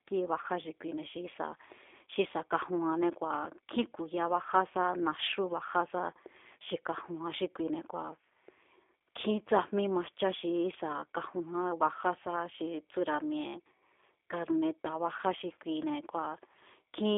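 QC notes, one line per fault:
throughout G.729 codec: the speech is rebuilt from a vocal tract model and sparse pulses, consistent with an 8 kbit/s coder. It sounds plainly rough and synthetic, with nothing above 3.6 kHz.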